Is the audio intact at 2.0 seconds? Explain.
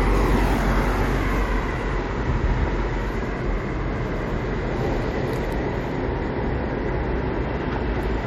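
No. From 2.03 to 2.08 s, repeated frames replay a 46.4 ms block once more, likely two compressed frames, producing a brief stutter and adding 46.4 ms.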